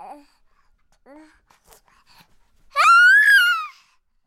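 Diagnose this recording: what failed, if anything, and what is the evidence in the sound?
Bit error spikes at 1.73 s and 2.80 s: single-sample ticks near -18 dBFS, where a flipped bit in storage or a digital link briefly jumped the sample value.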